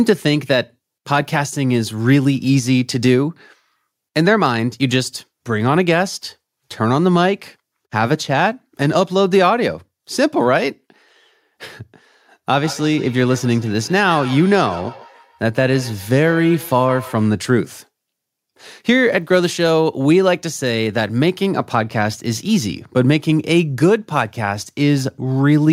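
Feedback echo between two devices runs from 12.5 s to 17.32 s. Two devices in the same space are joined to one call, so one device's loudspeaker replays what the other's microphone sent, and that microphone captures it again. Each echo canceller removes only its own playback, so the returned sound slips through. The speech comes back roughly every 150 ms as a thin, ringing repeat, at its loudest about 17 dB below the speech.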